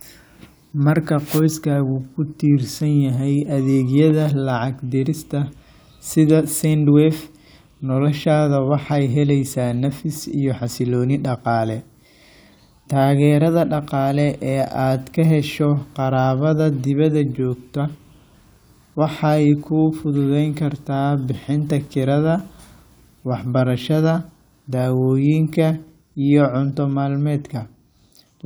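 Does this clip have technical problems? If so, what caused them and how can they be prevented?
No, this clip has no technical problems, so there is nothing to trace back to a cause or to prevent.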